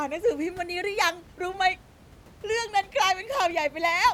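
Nothing goes wrong technically in this speech recording; the only thing in the background is a bit of room noise sitting about 25 dB below the speech, which just comes from the space it was recorded in.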